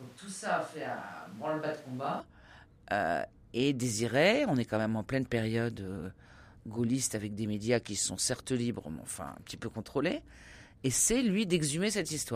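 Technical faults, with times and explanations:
0.00–2.20 s, switch to a distant microphone: the speech is hollow, thin in bass, about 10 dB quieter and noisier, then abruptly turns close. Unlike added reverb, level and noise also jump. The cause is likely a missing close-mic feed.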